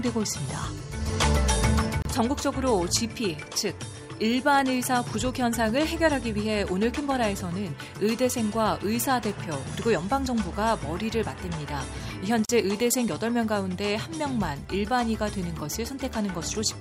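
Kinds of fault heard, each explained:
Gap at a join of encoded pieces: The audio was encoded in separate sections and joined without trimming. Each encoder pass leaves its start-up silence and its padded final frame in place. That leaves a brief hole in otherwise continuous sound. One opens at 2.02 s and lasts about 32 ms. A second opens at 12.45 s and lasts about 41 ms. Both edges are smeared by the codec. The sound then resumes exactly where it stopped.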